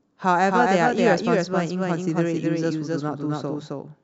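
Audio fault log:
throughout: doubled audio track. The speech was likely captured twice, with a second, slower path mixing in its own copy. An equally loud, full-band duplicate trails about a third of a second behind, with no decay or room colour, so every syllable lands twice.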